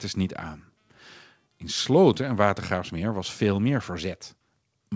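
No technical faults can be heard in the speech, which has come through the WebRTC call path intact, with nothing above 8 kHz, a ceiling that points to a wideband call codec such as G.722.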